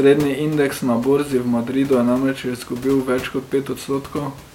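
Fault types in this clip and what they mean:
No technical faults are present in this speech recording.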